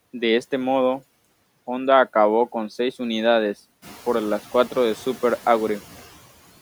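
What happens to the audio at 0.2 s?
At 0.2 s the background noise sounds pumped. These are noise suppressor artifacts, present throughout, from frame-by-frame band gating that cuts steady noise by about 15 dB.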